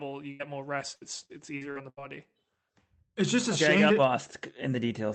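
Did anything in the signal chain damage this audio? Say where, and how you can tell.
Yes. Burst of packet loss at 0.31 to 0.41 s, just before "more rest": network packets were lost, so the receiver stretched and faded the last sound for about 80 ms, then resumed with about 80 ms missing.

Repeated packet loss (robotic sound) from 0.95 to 1.99 s, after "more rest": five network gaps, longest 76 ms, each patched by continuing the last sound, concealing a quarter of the span and leaving choppy, robotic audio.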